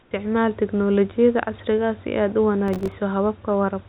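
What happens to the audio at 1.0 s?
Nothing goes wrong at 1.0 s: the speech passes through intact, with only the narrowband call path, which carries nothing above 4 kHz, and the quiet room noise, about 37 dB below the speech, audible there.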